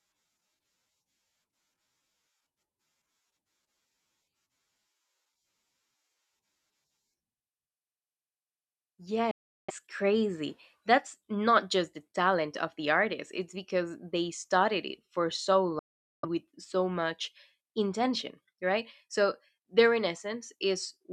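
Bluetooth dropouts cut the speech twice: from 9.31 to 9.71 s, and from 15.79 to 16.25 s, just after "studied it for so" and before "with so much intention". Each is a sudden hole of silence, about 370 ms and 440 ms long. Each likely comes from audio packets reaching the headphones too late and being discarded. The speech then resumes further on, as if it had kept playing through the gap.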